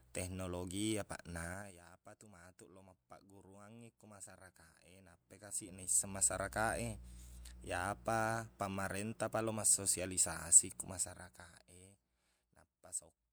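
Zipper noise shows up from 5.04 to 6.32 s, right after "mappagguruangngi ko masyarakat e", as the level climbs about 15 dB, and again from 10.84 to 12.03 s, after "pamarentapa lao massosialisasi ko", as it drops about 20 dB. Both times the gain jumps in unsmoothed 1 dB steps, around ten a second, and each step clicks, giving a ticking zip over the speech.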